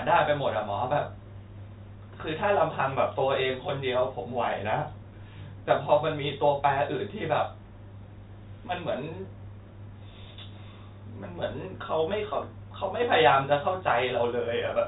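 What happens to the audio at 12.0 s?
Nothing goes wrong at 12.0 s: the speech carries on intact through that moment, with the band-limited telephone character of G.711 coding, which passes nothing above about 3.8 kHz.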